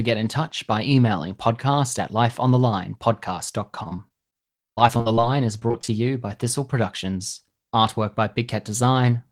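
From 3.83 to 5.90 s, just before "you by", the speech breaks up with repeated packet loss and a robotic sound. Short holes, the longest 43 ms, keep recurring. Each is patched by extending the previous sound. About a fifth of the stretch is filled this way, which makes it choppy.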